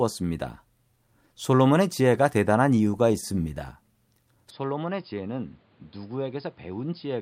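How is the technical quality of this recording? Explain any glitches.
The recording has two faults: a stutter in the middle and a loss of clarity in the last part.

From 2.75 to 3.58 s, repeated stalls (stutter): late packets drained the jitter buffer seven times, and the last sound was extended to fill about 75 ms in total. Nothing is lost, but the speech drags.

From 4.50 s to the end, the input likely switched to a poorer device. The band narrows, the level drops about 10 dB, and new noise appears with no gap at the change.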